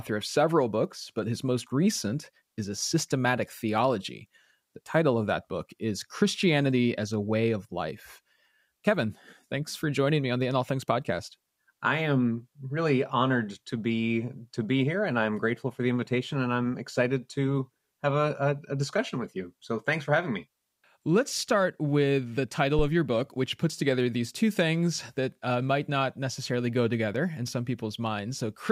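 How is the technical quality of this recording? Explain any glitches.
One glitch stands out. At 22.79 to 22.91 s, between "start with the" and "your book which puts", a deep thump peaks around -14 dBFS and dies away within about 27 ms. This is a phantom power thump: switching phantom or another supply on a live input sends a voltage step through the coupling capacitors.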